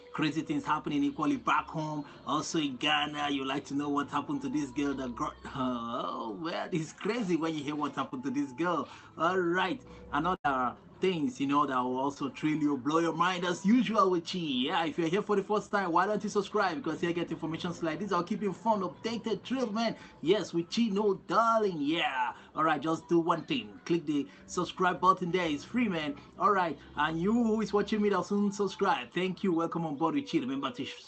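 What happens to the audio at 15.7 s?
At 15.69 to 15.72 s there is a short concealed packet loss. About 20 ms of the stream failed to reach the decoder in time, and the receiver synthesised roughly 16 ms to cover the gap, extending the preceding sound from its pitch or as shaped noise before crossfading back into the real signal. The result is a brief smear or wobble, and any short transient in that span can drop out entirely.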